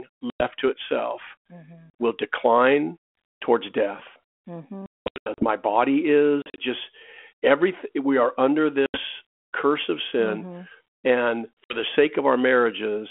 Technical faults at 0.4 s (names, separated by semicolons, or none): packet loss on an ADPCM call